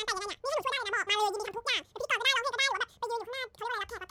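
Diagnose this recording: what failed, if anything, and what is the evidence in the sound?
Classic sample-format mix-up: the audio was read two samples at a time, so you get double speed. The whole speech clip runs twice as fast and a full octave (12 semitones) high. The reader treated sample pairs as single frames.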